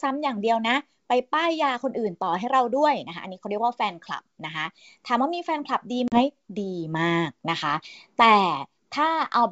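At 6.08 s, packet loss on an ADPCM call cuts a sharp-edged silent gap, roughly two packets' worth. The gap lasts about 40 ms, and the disturbance is over by 6.22 s. Then brief slight distortion appears while the decoder's predictor resynchronises.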